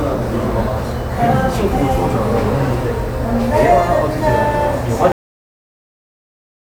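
A cut-off end hits at 5.12 s: the sound stops mid-event and falls straight into digital silence, with no decay, for the remaining 1.65 s. The final buffers were never written or played out, so the tail simply vanishes.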